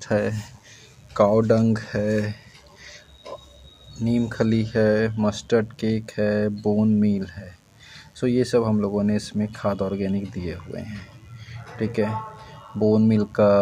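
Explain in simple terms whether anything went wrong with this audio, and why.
A mains buzz runs quietly underneath the sound for the whole clip. Sharp electrical spikes from 50 Hz mains power leak in, making a steady, raspy buzz. A plain hum would sound smooth and low; this one sounds gritty and edged.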